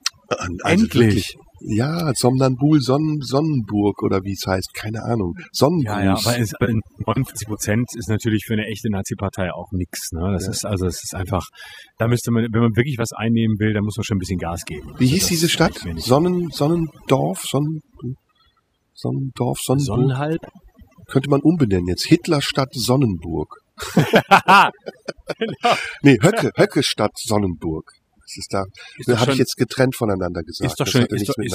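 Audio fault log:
throughout, overdone noise removal: heavy spectral gating pulls bands near the noise floor down to nothing, leaving near-silent gaps with twinkling specks.
20.32 to 20.60 s, intermittent contact: the signal drops for about 187 ms with crackle at both edges, unlike gating, which never snaps or crackles.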